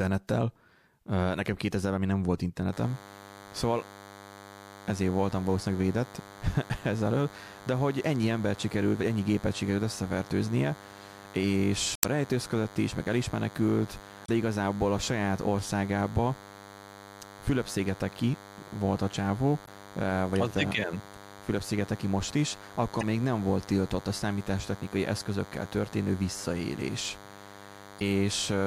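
From 2.72 s, right after "még nem volt", a DECT cordless phone buzz enters and runs to the end: a thin, steady 100 Hz buzz rich in harmonics, sitting around 20 dB below the speech, from 10 ms radio bursts rectified in the audio circuitry.

Damaged data in the compressed stream then produces brief chirps and blips at 11.93–12.05 s, 14.23–14.29 s, 19.63–19.68 s, 23.00–23.03 s and 27.98–28.03 s, where corrupted frames throw the decoder out of sync until it finds the next valid frame header.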